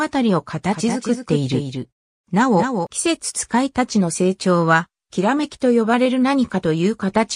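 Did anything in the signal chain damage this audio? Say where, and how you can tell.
Yes. A doubled audio track runs from 0.73 to 2.87 s. A full-band copy trails by roughly 200 ms, about 5 dB quieter, likely from a second, slower capture path. The spectrogram shows a shifted, undecayed duplicate with abrupt edges.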